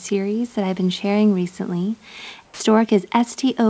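The sender's voice detector likely judged the tail of the speech after "I've been sharing recently" to be background and stopped transmitting, so from 2.45 to 2.60 s the sound dropped by the voice detector is replaced by 150 ms of comfort noise. About 70 ms of real speech is lost. The clipped ending gives way to a flat, steady hiss that sits near the room noise, about 38 dB below the speech, before the audio resumes.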